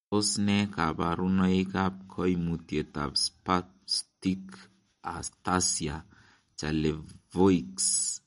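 Speech carries MP3 compression damage from start to finish, and it is plainly audible. Nothing remains above 11.2 kHz. Weak frequency lines flicker on and off, giving a watery, swirly texture. The likely cause is an encoder short of bits, which fits a rate near 48 kbps.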